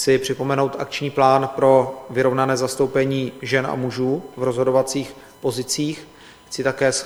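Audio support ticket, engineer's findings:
USB whine, fixed 1 kHz tone under the whole clip, well below the sound. USB bus's 1 ms frame current leaking in through power or ground.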